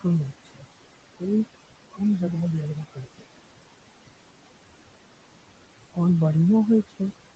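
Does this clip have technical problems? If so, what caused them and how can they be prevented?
Yes. Noise suppressor artifacts run throughout: the suppressor pulls steady background noise down by about 18 dB frame by frame, so the residue pumps, sinking between phrases and rising under the speech. A gentler suppression setting would prevent this, since the room noise sits only about 14 dB below the speech.

Speech cut by the noise suppressor occurs at 0.45 to 0.65 s and 2.95 to 3.28 s, where quiet speech was mistaken for noise and dropped by up to about 16 dB for roughly 150 ms each time. Lowering the suppressor's aggressiveness or raising its speech-detection sensitivity would prevent these cuts.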